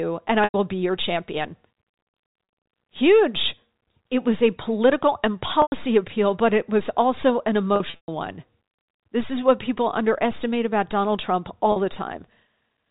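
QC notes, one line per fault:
0.44 to 0.54 s: packet loss with pitch repetition. About 100 ms of sound drops out. The last pitch period is repeated to fill it, so the sound holds and buzzes before fading.
2.44 s and 11.72 s: packet loss with pitch repetition. Each gap is 40 ms long. The repeat is short, so it sounds like a brief buzzy hold.
5.62 to 5.72 s: packet loss with pitch repetition. A 100 ms gap is bridged the same way. The buzz fades under the repetition.
7.76 to 8.08 s: packet loss with pitch repetition. About 200 ms is lost in bursts across 320 ms. The longest run is 120 ms. That run fades toward silence, and the sound cross-fades back in. The gap sizes fit 20 ms packets. The sound is band-limited to telephone range from the G.711 coding.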